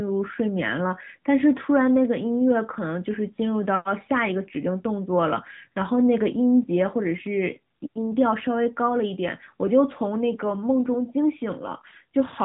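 Throughout, the speech shows AMR narrowband mobile codec damage: nothing passes above 3.8 kHz, and the sparse-pulse vocal-tract model leaves a plainly buzzy, synthetic tone, consistent with roughly 10.2 kbps.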